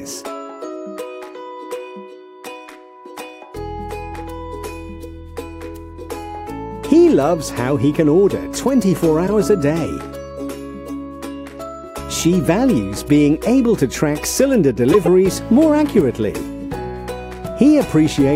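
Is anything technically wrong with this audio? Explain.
Yes. There are two corrupt frames decoded, at 9.27 to 9.29 s and 14.92 to 15.08 s. Flipped bits put energy at wrong frequencies. The result is a brief blip, then a much louder, longer burst.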